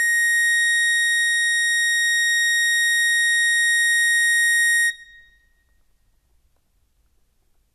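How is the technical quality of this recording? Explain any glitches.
No technical glitches can be heard in this music.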